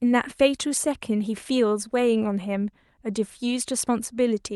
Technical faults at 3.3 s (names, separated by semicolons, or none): none